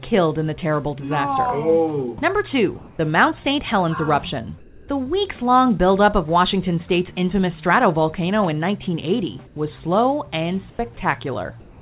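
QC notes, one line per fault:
2.78–2.99 s, 4.58–4.88 s, 9.47–9.56 s, 10.7–10.79 s and 11.6 s to the end: comfort noise in place of the background. In pauses about 25–28 dB below the loud passages, the real background gives way to a steady, featureless hiss. It is about 5–7 dB quieter except at 2.78 s, where it is roughly level. This is likely discontinuous transmission, with the receiver synthesising noise during silence. Nothing is heard above 4 kHz, which fits a 64 kbps G.711 call path.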